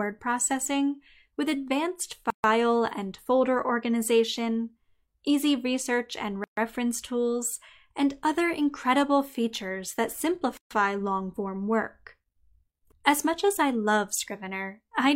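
At 2.30 to 2.44 s, 6.44 to 6.57 s and 10.57 to 10.71 s, the speech drops into silence: a gap at a join of encoded pieces. Each lasts about 133 to 137 ms and recurs every 4 s. Separately encoded pieces were butted together untrimmed, keeping encoder delay and end padding. The edges are smeared, and the speech resumes exactly where it stopped.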